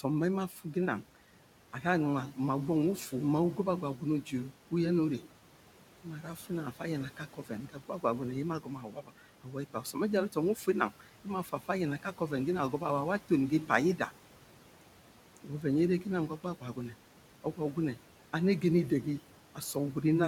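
Noise suppressor artifacts run through the whole speech clip. The suppressor pulls the steady room noise, which sits about 19 dB under the voice, down by about 12 dB. The leftover background dips between phrases and swells under them.

Speech is cut by the noise suppressor four times. From 3.11 to 5.29 s, about a fifth of a second of quiet speech sinks by up to about 10 dB. From 6.04 to 8.04 s, roughly half a second drops by up to about 11 dB. From 8.6 to 14.0 s, about 0.7 s in total falls by up to about 13 dB. From 15.37 to 18.0 s, about 0.4 s in total loses up to about 12 dB. Soft sounds were mistaken for noise and sound swallowed.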